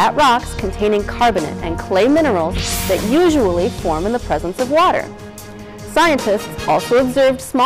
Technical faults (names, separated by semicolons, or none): hard clipping